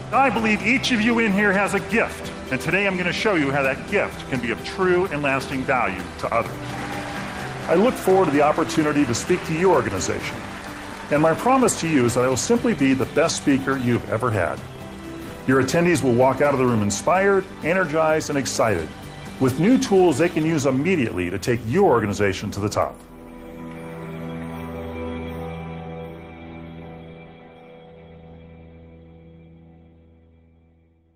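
No faults audible in this audio; nothing to report.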